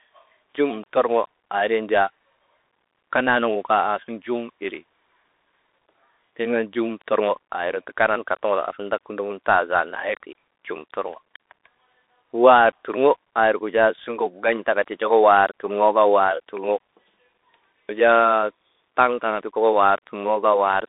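From start to finish the speech carries the sound of a Bluetooth CVSD headset codec. The band runs from 300 Hz to 3.7 kHz, with nothing above 3.8 kHz, which fits CVSD's one-bit delta coding at 64 kbit/s. Each sample only steps up or down, with an adapting step size, so fast high-frequency movement outruns the step. The codec damage is plainly audible: s sounds turn scratchy and a granular hiss sits beneath the speech.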